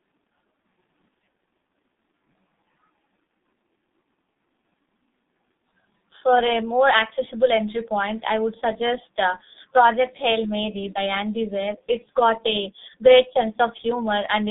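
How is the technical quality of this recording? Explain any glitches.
Quality is poor throughout. The whole clip has passed through the G.723.1 codec, and the damage is heavy. The speech sounds muffled and hoarse from start to finish. The line band runs from about 200 Hz to 3.7 kHz, and nothing is present above 3.8 kHz. The codec codes the voice in 30 ms frames with a very coarse model, which fits a rate of about 6.3 kbit/s. That model cannot follow fast changes, so consonants smear and the tone turns rough.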